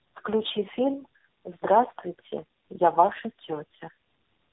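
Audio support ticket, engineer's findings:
Tandem speech coding, whole clip. Speech rough, muffled, warbly; nothing above about 3.8 kHz. Probable component: interconnect chain re-encoding at each border. Sound fits three codecs in a row, likely AMR-NB, CVSD, AMR-NB, bridged by G.711 mu-law. Each stage re-codes the previous stage's damaged output, compounding artefacts.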